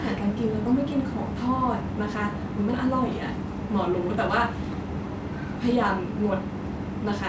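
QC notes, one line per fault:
No faults to note for this speech clip.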